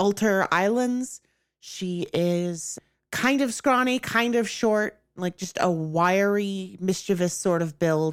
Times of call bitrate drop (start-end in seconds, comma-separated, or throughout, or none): none